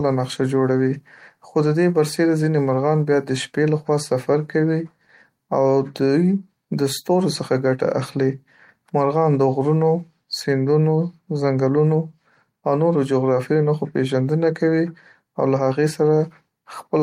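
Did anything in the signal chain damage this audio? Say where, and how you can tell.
No, nothing in the signal chain damaged this speech.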